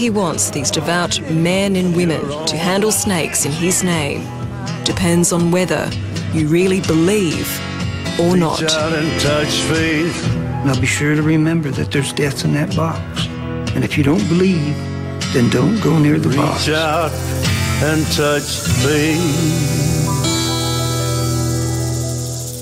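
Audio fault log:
No faults found in this audio.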